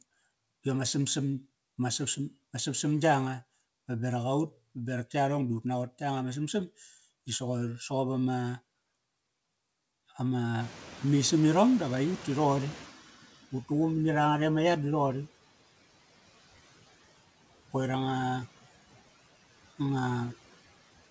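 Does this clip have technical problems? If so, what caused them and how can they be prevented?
Yes. Throughout, noise suppressor artifacts are audible: the background is pulled down by about 15 dB between phrases and swells back under the speech. Unlike codec noise, it pumps with the speech rhythm. Gentler suppression settings or a quieter microphone position would prevent it.

From 10.6 to 13.05 s the noise suppressor is catching up. Around the ten-and-a-half-second mark the room noise jumps by about 22 dB, and the suppressor's noise estimate takes about 2.45 s to follow, so the noise passes with less reduction and then sinks to about 11 dB of cut. The gradual fade after a sudden jump sets it apart from constant suppression artifacts. A faster-adapting suppressor would shorten this, and so would avoiding abrupt noise sources near the microphone.

The dullness above 8 kHz is the normal bandwidth limit of the G.722 call codec, which fits a 64 kbps setting, not a fault.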